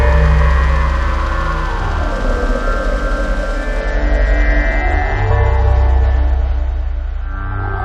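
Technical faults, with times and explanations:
3.81–7.84 s: adaptive stream at a lower bitrate. At 3.81 s the treble abruptly vanishes above 8.1 kHz with no gap, and codec artefacts grow until the end. This fits the stream dropping from 128 kbit/s MP3 to a 32 kbit/s version when the connection slowed.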